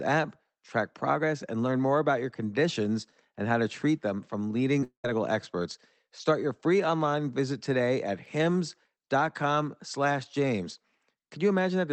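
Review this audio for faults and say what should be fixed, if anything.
Short concealed packet loss at 4.80 to 4.83 s, right after "to treat them from": about 10 ms went missing, and a 14 ms continuation covers it as a brief smear.

A long network dropout likely follows from 4.84 to 5.10 s. About 200 ms of audio is lost, and the receiver stretches the last sound for roughly 200 ms. It fades into about 100 ms of silence before the real audio resumes.

Both faults sit on the Opus call path, which carries audio up to 8 kHz. Better network stability and a larger jitter buffer or forward error correction would prevent these gaps.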